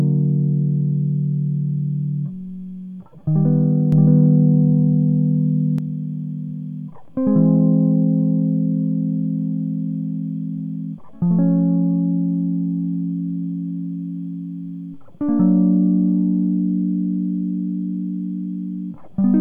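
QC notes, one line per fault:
3.92–5.78 s, doubled audio track: a second full-band copy of the music runs roughly 0.7 s behind at about the same level, with no decay or room colour, and cuts in and out abruptly, likely from a slower second capture path or a misaligned edit.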